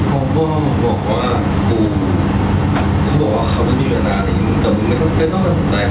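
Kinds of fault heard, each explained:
Gain pumping: Throughout the clip, the level is pulled down whenever the speech gets loud. The swing is around 5 dB. Loud and quiet syllables sit closer in level than they should, so the speech sounds squashed. The likely cause is input gain set far too high, with a fast limiter pulling it down on every peak. The room noise sits about 31 dB below the speech.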